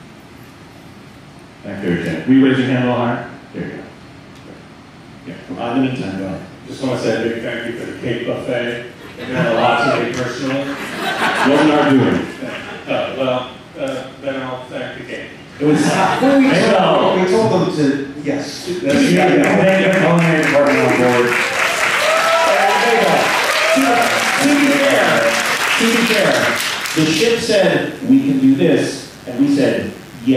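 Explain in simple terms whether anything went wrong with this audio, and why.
Mains buzz appears from 27.14 seconds to the end. Electrical interference from the 50 Hz power supply leaks into the audio, adding a quiet, steady, raspy buzz.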